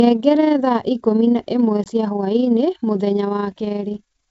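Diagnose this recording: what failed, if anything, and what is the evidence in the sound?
Network packet loss on an ADPCM call, over a G.722 wideband link: at 1.84 to 1.87 s the speech drops into a hard-edged 20 ms hole, about one packet's worth. The gap is filled with silence, and the decoder's predictor and step size lose sync with the sender's, so the speech comes back unsettled until the decoder catches up.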